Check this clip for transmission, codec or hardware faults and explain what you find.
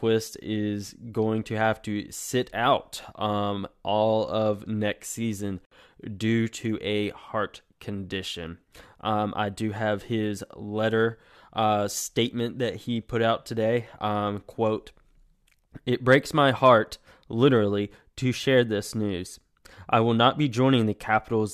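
One fault turns up in this speech clip. A gap at a join of encoded pieces sits at 5.65 to 5.71 s: the audio was encoded in separate pieces and butted together untrimmed, so one piece's end padding and the next piece's start-up delay stay in. This leaves a gap of about 62 ms with smeared edges, and the speech then resumes exactly where it broke off.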